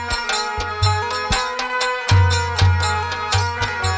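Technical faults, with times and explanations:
Throughout: wrong sample rate. Everything runs slow and low, 0.73 times speed and 5.55 semitones down, fitting 22 kHz audio played at 16 kHz unconverted.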